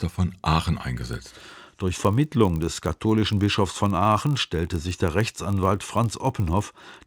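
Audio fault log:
1.09–7.07 s filter restarted on every block: the filter starts each block from silence, so a small transient per block sums into a 46.9 Hz buzz tracking speech level, which fits 1024-sample blocks.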